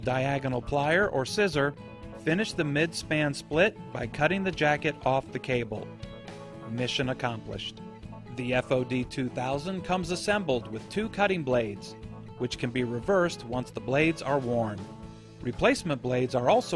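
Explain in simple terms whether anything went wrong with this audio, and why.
Nothing went wrong here, as far as anyone listening can tell; there's no glitch, dropout or distortion anywhere in it, so there's nothing to explain.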